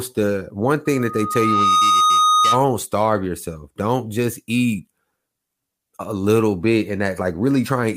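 The microphone picks up its own loudspeaker, causing a loudspeaker feedback squeal from 0.85 to 2.66 s: a 1.2 kHz tone swelling over about a second.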